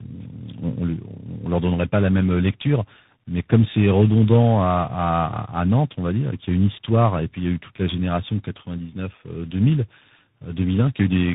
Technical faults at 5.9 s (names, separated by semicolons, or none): tandem speech coding